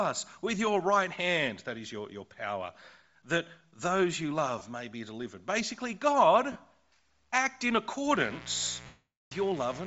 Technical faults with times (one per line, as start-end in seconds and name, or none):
0.00-9.87 Bluetooth LC3 compression
4.59-4.61 lost LE Audio frames
6.52-6.56 lost LE Audio frames
8.12-9.87 mains buzz
8.86-9.32 lost LE Audio frames